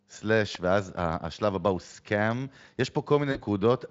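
A sharp, isolated snap cuts across the speech at 0.55 s, lasting only a few milliseconds and sitting on top of the sound rather than replacing it. This is an electrical switching spike: the likely cause is a nearby switch, motor or static discharge throwing a brief arc that the audio line picked up, heard as a dry click that is gone almost as soon as it arrives.

From 3.31 to 3.41 s the speech smears into a buzzy tone or coloured noise that fades out before clean sound returns. This is VoIP packet loss concealed by the speech codec. About 40 ms of audio went missing, which fits two lost 20 ms frames, and the Speex decoder, whose light coding coloration can be heard through the clip, filled the gap by extending its last pitch and filter settings at falling gain. Because each rebuilt frame depends on the one before, the weakened, distorted quality persists past the gap itself, so recovery extends to about 3.41 s.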